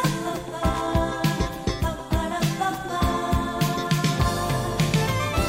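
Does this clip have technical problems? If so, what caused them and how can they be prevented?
Yes: a loose connector crackle runs from 0.73 to 0.90 s, where a worn or dirty contact rapidly made and broke, chopping the signal into an irregular scratchy burst. Its ragged, uneven spacing distinguishes it from regularly spaced digital clicks or buffer dropouts. Cleaning contacts, replacing worn cables and securing connectors against movement prevents it.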